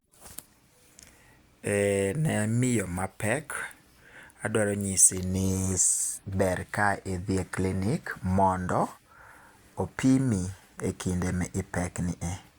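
No technical faults are audible.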